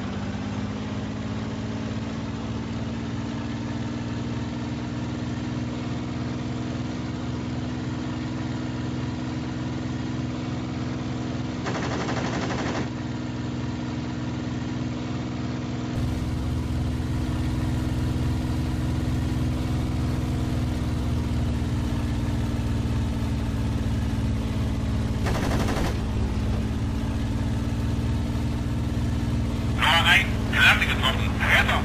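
Until 15.96 s, nothing passes above 7.6 kHz. The sound is dull, a little quieter, with faint background noise. It clears without a gap. Likely an input switched to a poorer device.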